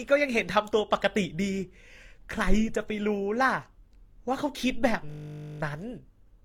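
Throughout, the speech sounds dull and smeared, with two kinds of swirling artefact layered together. The likely cause is transcoding between lossy codecs, fitting Opus followed by HE-AAC.

From 5.1 to 5.6 s, a system hang loop repeats one 20 ms slice of audio. It cycles at 50 Hz, heard as a steady buzz.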